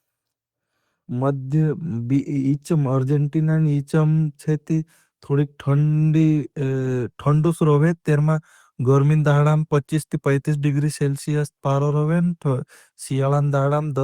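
Nothing goes wrong anywhere in this speech recording, so there's no technical fault to point to at any moment.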